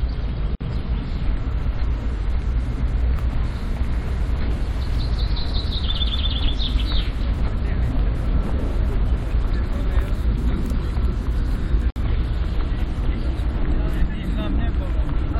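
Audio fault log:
0.55–0.61 s and 11.90–11.96 s: gap at a join of encoded pieces. The sound drops out for about 55 ms and then 57 ms before resuming exactly where it stopped. Each looks like a seam between separately encoded segments joined without trimming, so the encoder's start-up delay and the padded final frame both remain as silence. The edges are smeared by the codec, and nothing is lost from the underlying sound.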